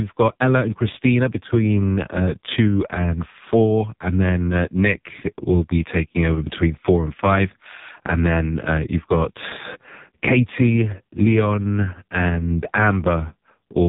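From the first moment to the end, the whole thing runs through an AMR narrowband mobile codec, the old 2G/3G phone speech coder. Nothing gets through above about 3.8 kHz, so the speech sounds boxed-in and dull. The codec rebuilds the voice from a vocal-tract model fed with a handful of pulses, and the damage here is heavy: buzzy, synthetic and brittle, which fits one of the lowest AMR modes, somewhere around 5 kbps.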